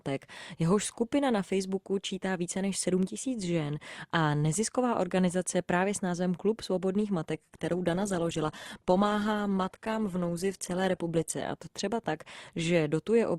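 From 7.34 to 11.34 s the speech suddenly turns coarser, with stronger codec artefacts and nothing above 12.3 kHz, yet no gap, starting right at "a to třeba tak". An adaptive stream at a lower bitrate stepped down as the connection slowed, fitting roughly 12 kbit/s Opus.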